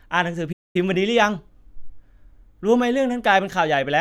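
At 0.52 s the player likely ran short of data or had its playback thread blocked, producing a playback stall: the speech cuts off mid-flow into silence lasting 223 ms, until output returns at 0.76 s.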